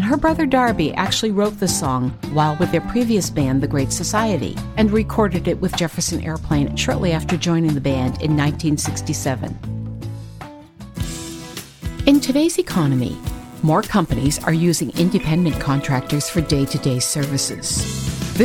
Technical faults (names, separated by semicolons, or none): mains buzz